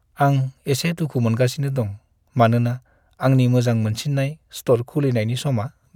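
No technical faults are audible.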